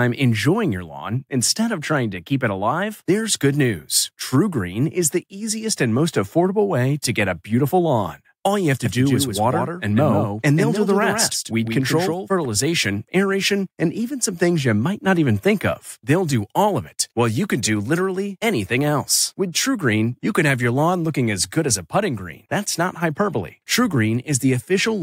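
Speech clip with a doubled audio track from 8.85 to 12.45 s: a second full-band copy trails by about 150 ms, roughly 5 dB down, starting and stopping abruptly, likely from a second, slower capture path.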